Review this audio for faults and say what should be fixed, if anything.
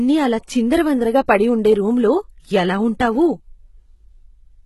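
Throughout the speech, treble above the core band sounds synthetic and s sounds turn gritty and lispy, likely from heavy HE-AAC compression rebuilding the top by band replication, with nothing above 11.8 kHz; this fits a bitrate near 16 kbps. Encode at a higher bitrate or with a full-band codec.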